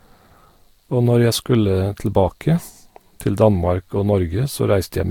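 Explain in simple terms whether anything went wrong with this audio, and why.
Across the whole clip the speech sounds swirly and hollow, with a watery smear and softened starts to sounds. That points to generation loss. The recording was likely compressed with a lossy format, unpacked and compressed again about three times, and each pass added fresh damage.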